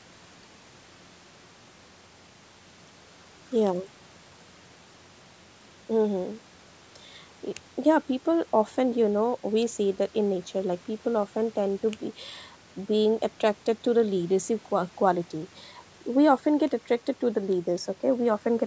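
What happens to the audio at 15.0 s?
Nothing goes wrong at 15.0 s: the speech carries on intact through that moment, with only the ordinary call microphone processing shaping it.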